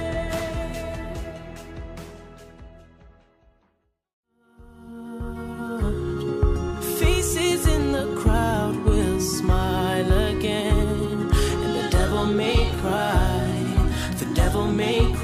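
No technical faults can be heard anywhere in the signal.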